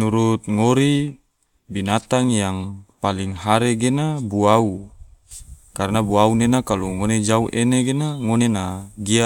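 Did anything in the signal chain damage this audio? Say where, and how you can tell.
No, nothing along the way from capture to playback seems to have damaged this speech, so there's nothing to point to at any stage.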